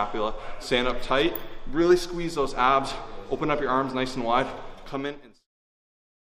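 No faults found; the smooth fade-out that begins around four and a half seconds and reaches silence at 5.48 s is a deliberate editor's fade with no click or hard edge.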